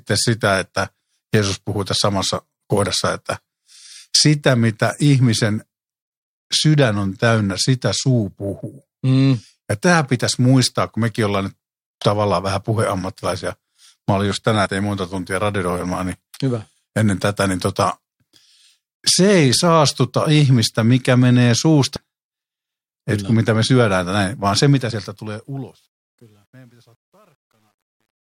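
Damaged data in the compressed stream causes brief glitches at 14.66, 21.95 and 24.90 s. Each time the decoder misreads corrupted frames and loses sync.

The fade-out shows truncation distortion from 24.70 s. Only 10 bits survive without dither. From 25.83 s to the end, it turns gritty.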